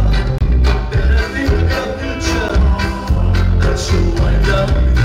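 Hard clipping runs through the whole clip: the level is pushed about 6 dB past what the chain can pass, so a small share of peaks are sliced flat. Unlike gentle saturation, the flat tops throw off high harmonics, giving a brittle crackle on the peaks.

At 0.38 to 0.41 s a block of digital silence cuts in for about 23 ms, which fits a 1024-sample buffer going unfilled. At 2.49 s a shorter 11.6 ms block follows, consistent with 512 samples. Both cut out abruptly with no fade, unlike a masked or faded dropout.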